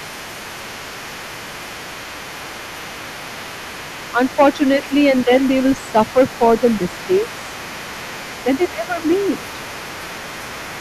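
A second voice is audible under the speech for the whole clip, sitting roughly 20 dB below it: the other side's voice leaking through, likely because the far end played on a loudspeaker and the echo canceller left a residue in the microphone signal. The speech itself also dips in short stretches at 4.13–4.91 s, 5.26–5.30 s, 5.92–6.40 s, 7.07–7.21 s, 8.44–9.03 s and 9.37–9.44 s. These dips run from a few decibels to about 15 dB, deepest around 8.4–9.0 s, consistent with speech suppressed in double talk, likely the canceller attenuating everything while both sides overlapped.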